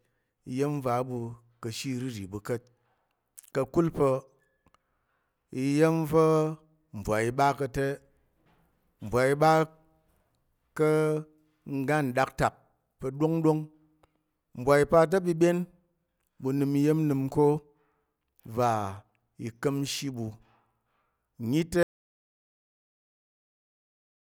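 An audio dropout to silence begins at 21.83 s and lasts to the end of this speech recording. The sound cuts off mid-flow into silence with no room tone. The likely cause is lost input while the recorder kept writing silence.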